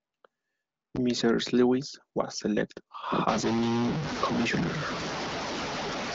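From 3.28 s to the end, the speech turns noisy and distorted, and the pauses fill with noise instead of falling silent. This is likely a stuck bit, one data bit held at a fixed value, offsetting about half the samples. The AMR-WB wideband path carries the audio up to about 7.6 kHz.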